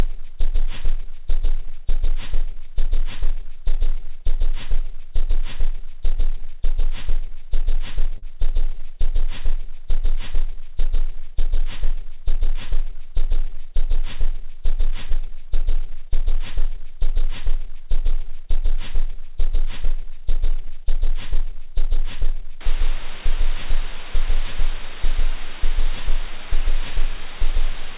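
At 8.18 s a brief smear runs through the everyday sound to about 8.27 s, and at 15.09 s a shorter wobble lasts until 15.12 s. Both are short concealed packet loss. Around 40 ms of audio at the first point and 20 ms at the second never arrived in time. The receiver covered each gap by extending what it had last heard, then faded back into the real signal. At 8.18 s about 11 ms was also trimmed, so what follows lands slightly early.

From 22.61 s to the end, a steady, even hiss sits under everything with no harshness or distortion. This is low bit depth with dither. The sound is carried on only about 5 bits, and noise was added before rounding so the coarse steps become smooth broadband hiss rather than gritty distortion. The hiss sits roughly 20 dB below the sound itself. Like the rest of the clip, it stops short of 4 kHz, which fits a narrowband G.711 call path.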